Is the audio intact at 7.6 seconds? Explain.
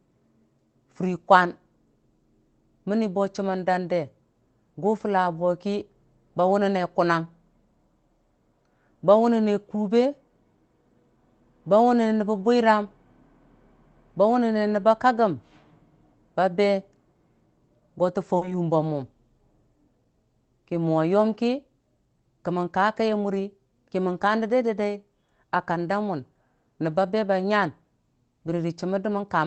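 Yes, the audio is intact at 7.6 s, with no dropout, glitch or other fault at that moment.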